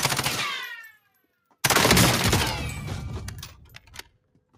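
A speech noise suppressor stays active on this non-speech audio throughout, treating sustained material as noise; level pumps with swings of around 10 dB. Between 0.89 and 1.54 s, and again from 3.64 s to the end, the suppressor cuts the sound hard, dropping it by about 18 dB and 19 dB so sustained parts sink and tails are cut short.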